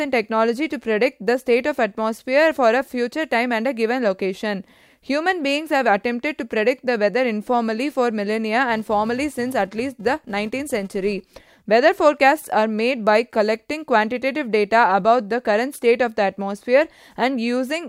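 From 8.69 s to 11.53 s the speech picks up a filter restarted on every block. The filter drops its memory at each block boundary and starts again from silence, so every block opens with a small transient. Those ticks recur at 375 Hz, which fits a 128-sample block, and they merge into a buzz that grows and fades with the speech level. A spectrogram shows harmonic lines at 375 Hz and its multiples, and the waveform shows evenly spaced glitches.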